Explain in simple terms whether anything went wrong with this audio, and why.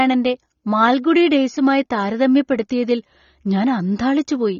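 Something did go wrong: the speech sounds dull and a bit smeared from start to finish, with a watery, fizzy edge on the hiss sounds. Nothing comes through above about 7 kHz, so the crisp top end is simply gone. That's most likely AAC compression squeezed too hard. To save space, the encoder throws away the high frequencies and roughly approximates the rest, and those shortcuts are clearly audible here.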